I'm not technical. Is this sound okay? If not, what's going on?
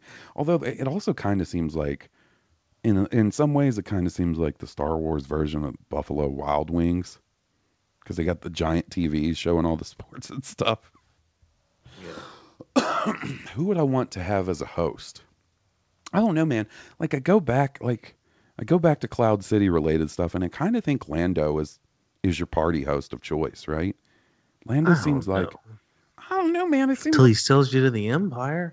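Yes, the speech came through a normal internet call connection without any technical fault, with the ordinary narrowing of sound that such calls bring, so nothing is heard above 8 kHz.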